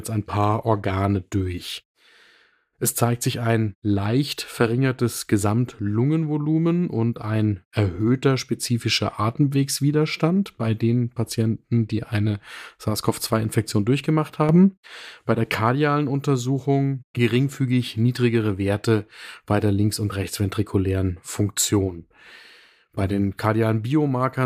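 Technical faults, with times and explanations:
14.49 to 14.87 s: sudden gain jump. The digital gain was likely switched to a new value between one sample and the next, with no ramp, as happens when a level setting or bit shift is applied abruptly. The speech and its background noise rise together by about 7 dB at 14.49 s and stay raised until 14.87 s. Because the noise floor lifts with the speech, this sounds like an abrupt lurch in level rather than the talker getting louder.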